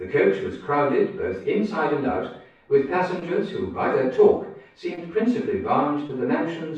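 At 3.19–3.23 s, 4.95–4.99 s and 6.07–6.11 s, short concealed packet loss leaves a brief smear: each time about 20 ms never arrived and was filled by extending the preceding sound. A spectrogram shows momentarily frozen, blurred detail; the waveform, repeated smoothed cycles.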